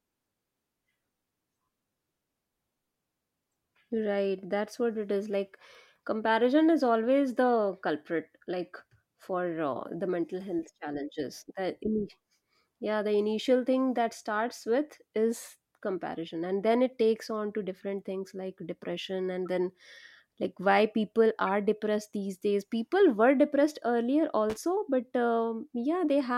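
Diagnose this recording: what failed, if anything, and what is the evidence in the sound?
Corrupt frame decoded, at 19.46 s and again at 21.47 s. This is a codec-stage failure. Each event is a brief blip in the speech lasting roughly one frame, where bits in the compressed stream were damaged and the decoder played the frame anyway. Misread gains and codes put energy at the wrong frequencies, so a short chirp or squeak stands out. The first is faint, around -45 dBFS; the second is louder, near -30 dBFS.

Loose connector crackle, from 24.50 s to 24.57 s. This points to the analogue wiring: a worn or dirty contact making and breaking as it moved. For about 75 ms the signal is chopped on and off rapidly, heard as an irregular burst of scratchy crackle over the speech. The rough, uneven texture distinguishes it from a digital dropout, which would cut cleanly rather than sputter.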